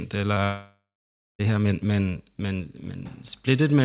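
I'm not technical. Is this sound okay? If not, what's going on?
No, there are two glitches in this speech recording, both early on.

The first, from 0.34 to 0.38 s, is a short concealed packet loss. A tiny scrap of the call, about 20 milliseconds, didn't arrive in time, so the receiving end papered over the gap by stretching out the sound just before it and blending back in. You'll hear it as a quick smear or wobble.

The second is bigger and sounds like a long network dropout. From 0.44 to 1.41 s, nearly a full second goes missing. At first the receiver keeps the last sound going as a fading buzz or hiss, but that runs out, and for roughly half a second there's only silence or a faint steady noise. The speech then picks up again at "her men men men", with everything said in between gone for good.

The muffled, phone-like tone throughout comes from the call line cutting everything above about 4 kHz.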